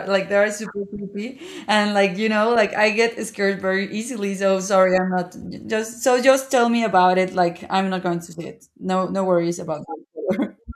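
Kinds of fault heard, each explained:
Compressed frames skipped: at 5.12 s the speech jumps forward by roughly 20 ms, as whole frames of the encoded stream were lost or rejected by the decoder as corrupt.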